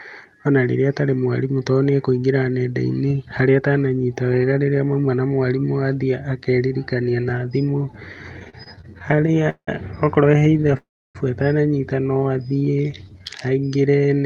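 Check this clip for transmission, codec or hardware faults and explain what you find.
Three kinds of network fault appear in this speech clip, heard over an Opus-style call path whose top end stops near 12 kHz.

Repeated stalls (stutter) at 8.39 to 9.69 s, 10.31 to 10.75 s (just before "atananyita no"), and 12.50 to 13.22 s: the speech hitches and drags, with gaps up to 180 ms in the first stretch. Late packets kept emptying the jitter buffer, and the receiver stretched the last sound to cover each gap.

Call audio freeze from 10.77 to 11.17 s: the sound hangs and then drops to about 0.3 s of silence before resuming intact. The likely cause is delayed packets starving the buffer.

Jitter buffer slow-down from 12.43 s to the end, after "atananyita no": the speech runs at about 87 % speed with unchanged pitch and drawn-out sounds. The receiver repeated pitch periods to rebuild its reserve.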